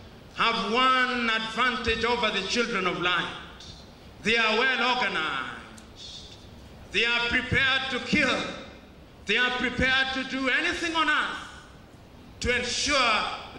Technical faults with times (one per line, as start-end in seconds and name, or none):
none